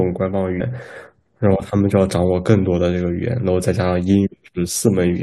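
At 0.59 s the speech jumps forward by about a tenth of a second as compressed frames are skipped, because the decoder never played them. Unlike a dropout, no silence appears.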